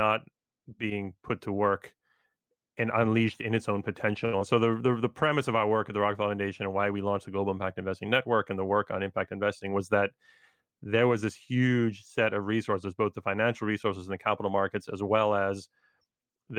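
A short stall from a late packet occurs at 4.25 to 4.35 s, right after "unleashed in its own". A packet missed its playout deadline and the jitter buffer ran dry, so the receiver held the last sound for 78 ms until the data arrived, then resumed exactly where it left off. Nothing is lost, but that moment of speech hangs unnaturally long with a faint buzzy sustain, and playback now runs 78 ms later than before.

A short concealed packet loss follows at 4.39 to 4.42 s, just before "so the". Here 40 ms of audio never reached the decoder in time. Instead of bridging the whole gap, the receiver synthesised only 11 ms of continuation from the preceding sound and blended back into the real signal, absorbing around 30 ms of the delay built up by the stall. It comes across as a quick smear or wobble, with a sliver of speech simply gone.

A jitter buffer speed-up runs from 9.68 to 10.19 s, after "the work on impact". 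The buffer had accumulated more audio than its target, so the receiver repeatedly cut out short pitch-period-sized pieces, trimming about 50 ms in total. Speech plays at 109% of normal rate over that half second while pitch stays unchanged, giving the phrase a slightly rushed, clipped feel.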